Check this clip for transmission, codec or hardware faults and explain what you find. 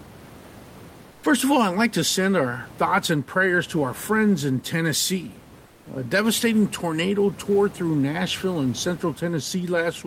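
Comfort noise in place of the background occurs twice, from 1.11 to 1.23 s and from 5.65 to 5.85 s. The sender likely stopped transmitting during pauses it judged silent, as Opus discontinuous transmission does, and the receiver filled each gap with synthetic noise. The real room noise, about 24 dB below the speech, gives way to a flat, featureless hiss, about 3 dB and then about 4 dB quieter, until the speech resumes.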